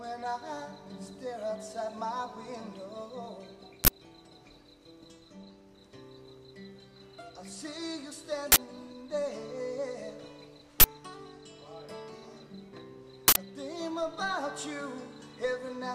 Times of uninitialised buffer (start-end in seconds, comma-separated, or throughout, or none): 3.84-3.88, 8.52-8.56, 10.80-10.84, 13.28-13.36